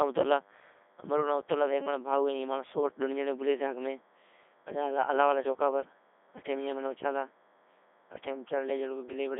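From the first moment to the end, a thin, steady buzz at 100 Hz with a stack of harmonics sits faintly under the speech. That's DECT cordless phone buzz: a nearby handset or base station fires a radio burst every 10 ms, and the audio circuitry rectifies it into sound.

The speech itself is throughout heavily damaged by a Codec 2 vocoder. It comes out robotic and buzzy, because the decoder rebuilds it from sine waves using only pitch, voicing, energy and a spectral envelope, discarding the original waveform. The sound points to the codec's top 3.2 kbit/s mode. The band runs roughly 250 Hz to 3.5 kHz, with nothing above 3.8 kHz.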